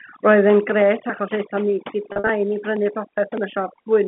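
Overdone noise removal runs throughout the speech: the suppressor pushes bands near its noise estimate to nothing, leaving twinkling specks in near-silence, unlike the steady dullness of simple band-limiting. From 2.12 to 2.28 s comes packet loss with pitch repetition. About 110 ms of audio is missing, scattered over 160 ms with no gap longer than 50 ms. The receiver fills each hole by repeating the last pitch period, so the sound is short buzzy held fragments rather than clicks or hard silent dropouts.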